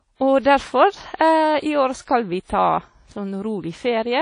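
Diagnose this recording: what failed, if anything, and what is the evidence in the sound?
The speech sounds dull for the full length, with nothing above about 10.1 kHz and the artefacts of a heavily squeezed encoding, even though the file itself is a roomy MP3. This is a codec-stage fault, most likely low-bitrate audio saved at a high bitrate. An earlier encoder, one that points to something like 32 kbit/s WMA, stripped the top band and detail first, and the later MP3 pass at around 181 kbit/s simply preserved that damage.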